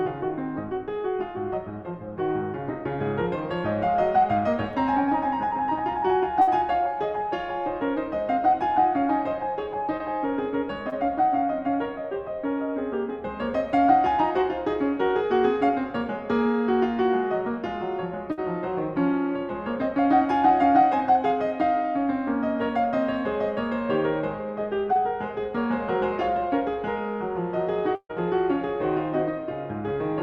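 A music recording with two kinds of network dropout. Bursts of packet loss occur at 6.41 to 6.49 s and 18.32 to 18.39 s, each losing about 60 ms. The receiver holds and fades the last sound, then the music jumps ahead. A longer burst at 27.95 to 28.11 s loses about 140 ms, and the held sound fades to silence for about 60 ms. Short concealed packet loss appears at 9.97 to 10.02 s, 10.90 to 10.94 s and 24.93 to 24.97 s. Each time about 20 ms is missing and is patched from the preceding sound, which leaves a brief smear.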